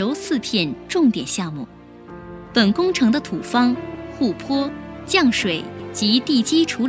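No faults found; the lowest bass is trimmed and nothing sits above 8 kHz, consistent with ordinary call microphone processing.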